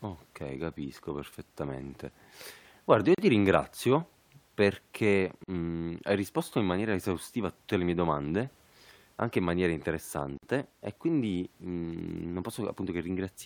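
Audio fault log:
3.15–3.18 s, 5.44–5.48 s, 10.38–10.43 s: gap at a join of encoded pieces. The speech drops to silence three times, for 37 ms, 44 ms and 53 ms. Each hole has its edges smeared by the codec, so the silent part is shorter. The sound then resumes exactly where it stopped. These are seams between separately encoded pieces joined without trimming. Each piece keeps its encoder's start-up delay and its padded final frame, so a short stretch of dead air sits at every join.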